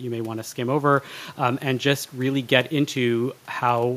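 No technical faults are audible.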